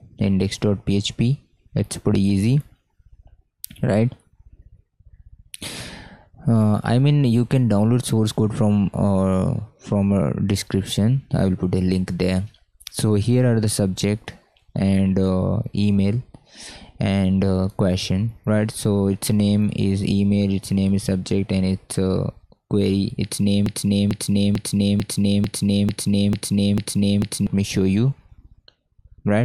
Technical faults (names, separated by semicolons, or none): broken-record loop